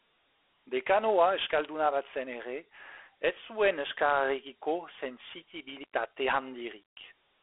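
The speech is carried throughout by Dialogic VOX ADPCM. The band runs only from about 300 Hz to 3.5 kHz, with nothing above 3.8 kHz, and a plainly audible gritty hiss tracks the speech, which fits 4-bit OKI ADPCM at 32 kbps.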